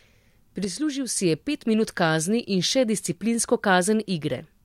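From 0.64 to 1.16 s the speech drops abruptly by about 6 dB, recovering just before "je pet minut kazni". The cause is likely one channel drops out, halving the mono sum. The sharp step, with no fade, sets it apart from a gain dip.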